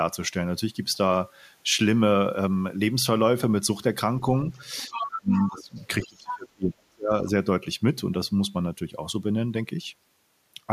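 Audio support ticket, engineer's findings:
Other side's voice leaking through. Likely cause: the echo canceller leaves residual loudspeaker playback in the mic path. Far-end voice audible under the talker at 4.54–5.06 s (about 10 dB down), 5.33–5.64 s (about 15 dB down), 5.80–5.86 s (faint scrap, about 35 dB down) and 6.02–6.36 s (about 10 dB down). Heard as a second voice in short bursts.

Speech suppressed in double talk. Likely cause: the echo canceller cannot separate the near-end talker from far-end echo while both speak, so it attenuates everything. Talker's level collapses at 5.06–5.76 s, deepest drop roughly 30 dB, about half a second affected. Again at 6.06–7.27 s, deepest roughly 35 dB, about a second affected. Voice dips, overlapping the leaked far-end audio.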